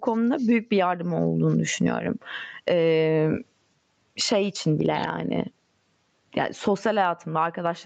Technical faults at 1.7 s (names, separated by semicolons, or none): gain pumping